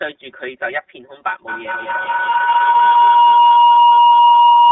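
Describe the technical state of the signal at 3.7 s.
At 3.7 s a feedback howl is in progress. It began at 1.48 s and runs to the end of the clip. Sound from a loudspeaker is returning into a microphone on the same call and gaining level on each trip. The repeats have narrowed to a tone around 1 kHz, with a loop delay of roughly a fifth of a second. At its loudest it sits about 12 dB above the speech.

Channel delay (comb filtering) is present here as it is throughout. One channel trails the other by about 5 ms, and the two are summed to mono. Content common to both cancels at regularly spaced frequencies, starting near 100 Hz. The result is a fixed series of spectral notches that makes the speech sound hollow and phasey.

The iLBC codec is also active across the whole clip. The line band is limited to roughly 300 Hz to 3.6 kHz, which fits this narrowband VoIP codec in its 13.33 kbps mode with 30 ms frames. 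Each frame's excitation is coded independently, and the damage is plainly audible as a rough, synthetic texture on the speech.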